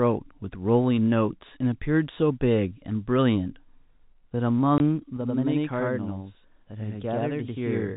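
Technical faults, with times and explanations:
4.78 to 4.80 s, packet loss filled with silence: the sound drops out completely for 20 ms, which fits two 10 ms packets going missing. The receiver had nothing to play for that span, so it inserted digital silence. Because the waveform is cut abruptly at both edges rather than faded, the gap reads as a brief hard hole in the speech.
5.17 s to the end, channel delay (doubling): from here on, one channel arrives about 92.9 ms behind the other, which fits a 4096-sample buffer. When the two channels are summed to mono, the late copy does not blend in as colouration. At that spacing it is heard as a distinct second instance of the speech at the same level, a slap echo trailing each syllable. This makes the delivery sound doubled and smeared until the clip ends.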